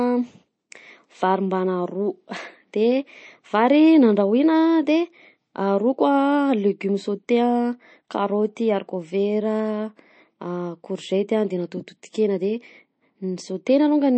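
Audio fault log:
Throughout, MP3 compression: nothing at all comes through above 8.4 kHz, so the top end of the speech feels dull and boxed-in, and there's a plainly audible watery, swirly quality, with s sounds going chirpy and metallic. That's likely an MP3 encoder starved of bits, chopping the treble at a fixed point and dropping weaker frequency detail that flickers in and out frame to frame. The amount of damage fits a low bitrate, something around 35 kbps.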